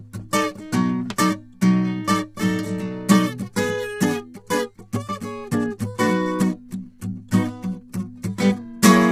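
A music clip that sounds rough and grainy from start to finish, with noise filling the gaps between harmonics and nothing above about 20.4 kHz. The likely cause is heavy low-delay AAC compression, where short frames resolve pitch poorly, fitting a bitrate near 24 kbps.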